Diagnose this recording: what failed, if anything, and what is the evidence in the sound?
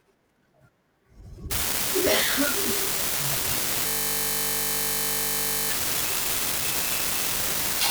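A marginal data line between the converter and the rest of the chain leaves one bit unreliable from 1.51 s to the end. That bit flips in a random share of samples, each flip adding a spike of identical size. This produces a steady crackle that continues through the pauses in the speech.

A system hang loop occurs in the driver and buffer stage from 3.88 s to 5.70 s. The host froze while the audio hardware kept replaying a 20 ms ring buffer about 90 times, so the speech gives way to a steady buzz at 50 Hz.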